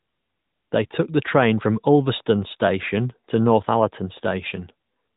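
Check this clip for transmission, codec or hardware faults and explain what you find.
No transmission, codec or hardware faults turn up in this clip.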